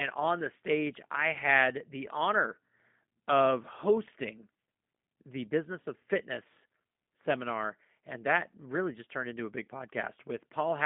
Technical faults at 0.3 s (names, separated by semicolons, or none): G.729 codec